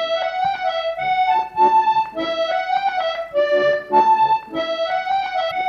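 At 5.47 to 5.52 s, near the very end, there is damaged data in a compressed stream. For about 40 ms the decoder meets corrupted frame data, loses sync and hunts for the next valid header. It sounds like a short chirp or blip.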